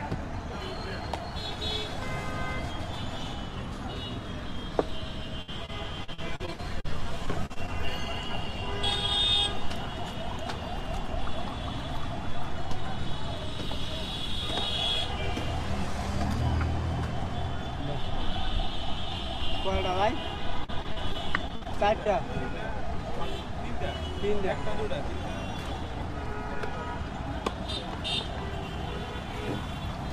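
From 5.41 to 6.86 s, again from 7.26 to 7.69 s, and once more from 20.64 to 22.10 s, there's repeated packet loss, with that robotic sound. Packets kept going missing, and each hole got filled by stretching the last bit of audio, the longest about 62 ms. So it turns choppy, with small pieces dropping out.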